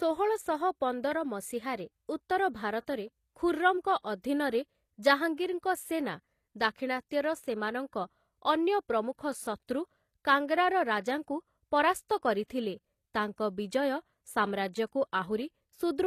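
Throughout the speech, the treble sounds bright yet synthetic: sibilants come out gritty and metallic, with a lispy edge, and nothing reaches above about 14.9 kHz. This is likely HE-AAC compression, at a low bitrate that fits roughly 24 kbps. The upper band is rebuilt by copying lower bands upward, so its harmonics fail to line up with those below. A plain low-pass filter would sound dull instead, and ordinary transform-codec swirl lacks this copied, metallic top.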